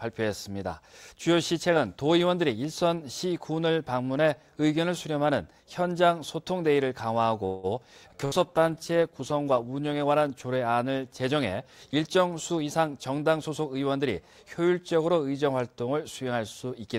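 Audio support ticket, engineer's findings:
Sound stalls 7.45–7.66 s, last sound held as a fading buzz or hiss for 180 ms, then resumes where it left off with nothing lost. Call audio freeze, likely packets delayed in transit and the jitter buffer running dry, adding 180 ms of latency.

Abrupt jump forward at 8.11 s, near-seamless join, roughly 70 ms of audio gone. Skip ahead: audio dropped in transit or by an overflowing jitter buffer while later audio waited (around 50 ms of delay trimmed), splicing both sides almost directly.

Drawn-out stretch 8.17–8.64 s, pitch unchanged, playback at 90% speed. Jitter buffer slow-down: the receiver repeated pitch-period-sized pieces to rebuild a depleted reserve, inserting 55 ms overall.

Inside that stretch, a brief held sound fading out 8.25–8.34 s, then resumption further on with 60 ms missing. Burst of packet loss: consecutive packets lost or late. 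The concealment extended the last sound for 62 ms while attenuating it.

Rough, watery, dulled tone 8.33–11.54 s, highs audibly cut. Call bitrate drop: the bandwidth estimate collapsed and the encoder fell from 96 to 19 kbps, sitting at the floor for 1.31 s, so coarser coding and low-pass limiting set in.

Hurried passage 12.48–13.81 s, same pitch, running at 113% speed. Jitter buffer speed-up: excess queued audio. The receiver removed short pitch-period pieces repeatedly, about a fifth of a second in total, to pull latency back down.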